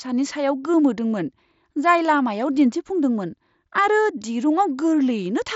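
Speech carried over a Bluetooth mSBC headset link, with nothing technically wrong with it.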